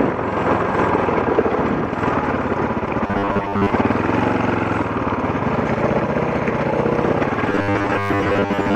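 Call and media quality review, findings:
Robotic sound from repeated short buffers, 3.07–3.72 s and 7.50–8.75 s: rigid 100 Hz metallic buzz, likely from late audio, with about 10 ms chunks looping over most of the skipped sound.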